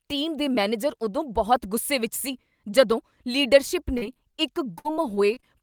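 Repeated packet loss struck from 3.97 to 4.40 s and again from 4.78 to 5.44 s, with gaps up to 41 ms and then 62 ms patched by stretching the preceding sound, so the speech turns choppy and robotic, with fragments missing.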